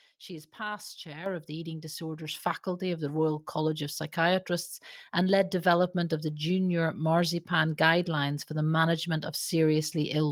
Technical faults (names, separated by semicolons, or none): microphone volume stepped up